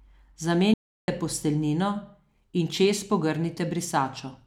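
Speech, where the input was likely lost briefly, causing an audio dropout to silence from 0.74 to 1.08 s: about 0.34 s of complete silence with no room tone.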